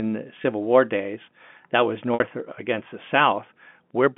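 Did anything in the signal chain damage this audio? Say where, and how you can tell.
Yes. Packet loss with pitch repetition in the network stage: a brief gap at 0.42 s (about 20 ms) sounds slightly held and buzzy, and a longer one from 2.14 to 2.20 s, just before "against the", lasts about 60 ms (consistent with three 20 ms packets). The receiver bridged each gap by looping the last pitch period. The longer loop decays toward silence before the speech cross-fades back in, all over the 200 Hz to 3.4 kHz telephone band.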